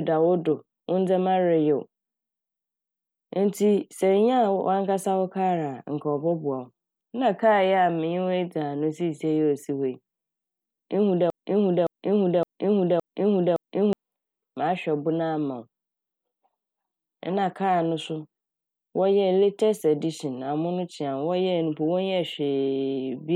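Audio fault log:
11.30–13.93 s, broken-record loop: the speech suddenly gets stuck on a short chunk of about 0.57 s and plays it back to back five times, each pass identical, before normal playback picks up again. The likely cause is the player, encoder or stream stalling and resending the last fragment it still had in memory. Whatever should have been heard during those couple of seconds is gone rather than delayed.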